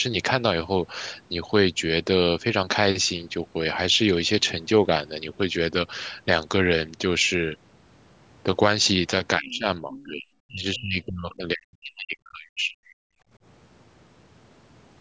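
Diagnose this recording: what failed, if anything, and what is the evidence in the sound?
The failure sits in the call processing stage, specifically the echo canceller. Speech is clearly being pushed down in two stretches. From 9.39 to 10.26 s it dips by roughly 20 dB at its worst, over about 0.7 s in total. From 10.45 to 13.0 s it sinks much harder, around 40 dB at the bottom, for roughly two seconds. This is likely speech suppressed in double talk. The far side was talking at the same time, the canceller couldn't separate the local talker from the loudspeaker echo, and it ducked everything.

In that first window you can also hear the other side's voice leaking through, in two faint scraps. One runs from 9.51 to 9.58 s at about 25 dB under the talker, and the other from 9.9 to 10.03 s at about 20 dB under. That's likely residual loudspeaker echo the canceller didn't fully subtract from the mic signal. 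It shows up as fragments of a second voice right where the canceller was struggling with the double talk.

Right after that, from 13.28 to 13.32 s, the room background ducks by about 12 dB for roughly 40 ms and then comes back. That's background gated by the echo canceller. It clamped the mic down briefly while the loudspeaker was active and then let go. It's short enough to register as a tiny hole in the ambience. Separately, nothing comes through above 8 kHz, which is consistent with normal call mic processing.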